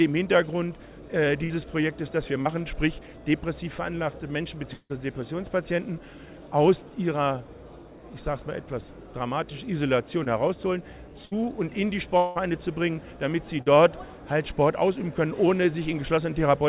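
Audio carried over a narrowband call path, with nothing above 4 kHz, which fits G.711 mu-law at 64 kbps, breaks up repeatedly. Short concealed packet loss at 2.42 to 2.47 s and 10.24 to 10.27 s leaves only a brief smear or wobble, 40 and 20 ms of audio missing, too short to build into an audible held sound. A burst of packet loss at 1.44 to 1.52 s, 11.25 to 11.33 s and 13.61 to 13.68 s is longer, 40 to 60 ms gone each time. There the last sound is stretched into a held buzz or hiss that fades before the audio picks up further on. The long network dropout at 4.73 to 4.92 s and 12.17 to 12.37 s is longer still, with 160 and 180 ms lost. That concealment fades away, and the first gap sinks into about 50 ms of silence. Both gaps are likely a stall in packet delivery.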